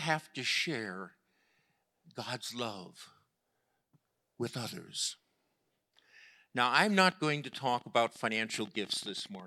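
From 6.97 to 9.41 s there's a train of clicks, about forty irregular pops at roughly 14.4 per second, as loud as the speech, likely interference.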